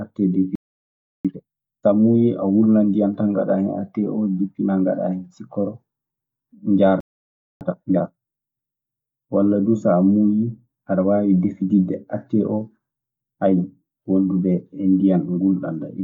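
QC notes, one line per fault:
0.55–1.25 s, playback stall: the speech cuts out for about 0.69 s mid-flow, most likely the player running dry or its thread getting blocked.
1.25–1.93 s, time-compressed catch-up: speech comes back hurried at 2x but normal pitch, from spliced cross-fades, settling before "muuyii a wulnan ndiyan".
7.00–7.61 s, playback stall: another dropout, about 0.60 s of silence, again likely a starved or blocked player.
7.61–8.21 s, time-compressed catch-up: same 2x rush at unchanged pitch as the backlog gets trimmed.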